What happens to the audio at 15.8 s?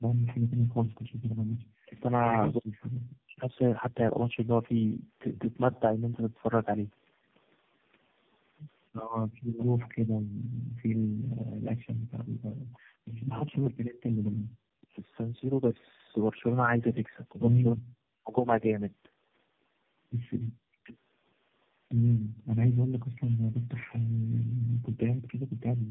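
At 15.8 s the speech carries tandem speech coding, which runs through the whole clip rather than starting there. The sound fits three low-rate speech codecs in a row, each one re-encoding the previous one's already degraded output, so the voice comes out rough, muffled and warbly. A spectrogram shows a hard ceiling with nothing above 3.7 kHz, and smeared, blotchy harmonics below it instead of clean striations.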